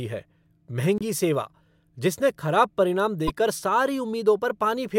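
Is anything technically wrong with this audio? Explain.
Yes. The speech has damaged data in a compressed stream at 0.98 to 1.03 s and again at 3.27 to 3.30 s. Corrupted bytes make the decoder misread those frames and lose sync while it hunts for the next header, leaving a short glitch each time.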